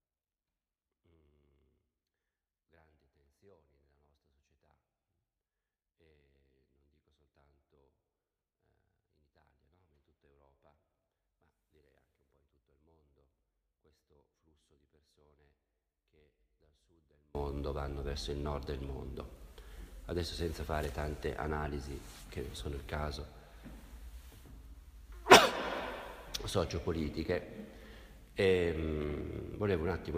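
From the start to 17.35 s the sound collapses to a faint residue about 32 dB down, its centred content nearly gone. The likely cause is one channel inverted: with one side's polarity flipped, everything shared between channels cancels in mono.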